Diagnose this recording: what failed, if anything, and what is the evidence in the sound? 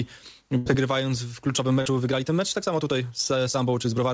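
Network stage: a burst of packet loss at 0.58 to 0.68 s. The last sound gets held and faded, then jumps ahead, dropping about 80 ms.

From 1.56 s to the end the pace suddenly runs about 1.46 times faster at the same pitch, rushed. That's likely a time-stretched section from software fitting a length.

Network again: short concealed packet loss at 1.82 to 1.87 s. About 36 ms is patched by extending the previous sound, heard as a brief smear over the call path's 8 kHz top end.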